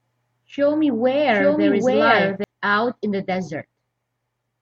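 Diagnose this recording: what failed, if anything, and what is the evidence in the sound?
Until 2.44 s the speech repeats about 0.7 s later at roughly equal level, then stops abruptly: a doubled audio track, likely a slower duplicate capture path.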